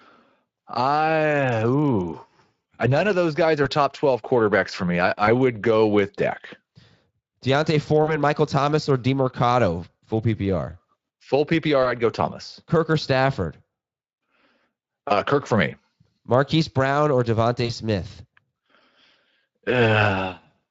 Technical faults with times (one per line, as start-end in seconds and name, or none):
3.63-3.67 VoIP packet loss concealed by the speech codec
5.25-5.29 VoIP packet loss concealed by the speech codec
8.03-8.17 VoIP packet loss concealed by the speech codec
11.83-11.92 VoIP packet loss concealed by the speech codec
17.65-17.72 VoIP packet loss concealed by the speech codec